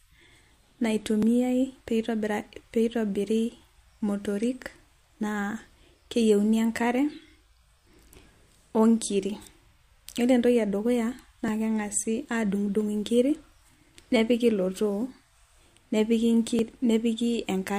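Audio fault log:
1.23 s, 11.48 s, 16.59 s: dropped buffer (overrun). Each time the speech jumps slightly ahead, with no gap of silence. Only a few milliseconds of sound go missing, so no word is lost. The likely cause is the recording program failing to collect a block of samples before the hardware overwrote it. The audio on either side of the missing block is then butted together, and that abrupt join is heard as a jump.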